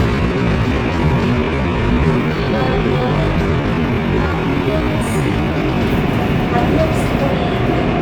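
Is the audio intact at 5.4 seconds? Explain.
No. At 5.4 seconds the audio is inside a time-stretched section running from 0.0 to 5.82 s, where it plays at about 0.51 times its normal speed without dropping in pitch. It was likely slowed in software by repeating short pieces. It drags, then the pace jumps abruptly at 5.82 s. A spectrogram shows features stretched to roughly twice their width at unchanged frequencies.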